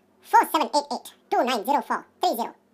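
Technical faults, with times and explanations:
Throughout, wrong sample rate: the speech runs at twice its natural speed and sits 12 semitones, a full octave, higher. This points to audio captured at about 22 kHz being played back at 44.1 kHz with no conversion, so every second of sound is squeezed into half a second. Pitch and tempo rise together by the same factor, which distinguishes this from a pitch shift or a time-stretch, where one changes while the other holds.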